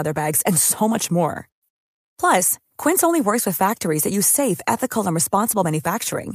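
From the start of the speech to its end, the clip shows clock drift between sender and receiver. The sending device's clock runs roughly 4 percent faster than the receiving one, so audio arrives a little quicker than it is played out, and the receiver's buffer steadily fills. What separates this from network jitter or packet loss is the consistency: the disturbance never clears and always points the same way, instead of coming in random bursts tied to delivery problems.

Between 0.07 and 6.30 s the same problem is heard as repeated timing corrections. To stop its buffer overflowing, the receiver keeps trimming short slices of audio, and over that stretch the speech plays back at about 104 percent of its natural pace. Each cut is tiny, so it comes across as faint hiccups and a slightly hurried, uneven rhythm rather than distinct gaps. Lost-packet concealment is different: it leaves isolated smeared or muted spots, while these edits recur at uneven intervals all through the stretch and are always removals.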